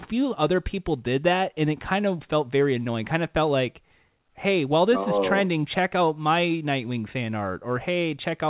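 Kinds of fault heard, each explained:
No faults heard in the speech; the audio has nothing above 4 kHz, as expected from the telephone-band call path it came through.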